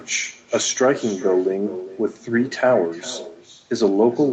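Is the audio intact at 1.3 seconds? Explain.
No: echo with no canceller runs throughout, so the far end's loudspeaker returns the talk about 0.4 s later, about 16 dB quieter, showing as faint delayed spectrogram streaks.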